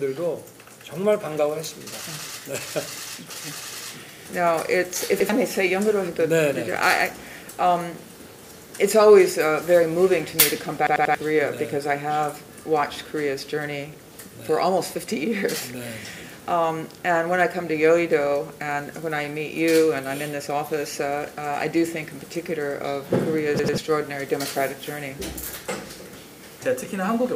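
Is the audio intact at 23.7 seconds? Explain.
No. From 23.59 to 23.78 s there is a repeated buffer. New audio did not reach the output in time, so the device replayed its last block of about 93 ms, which fits a 4096-sample buffer, two extra times. The same short piece of sound is heard three times in a row with a hard join at each repeat, giving an audible stutter. Around 0.2 s of the original audio is lost in its place.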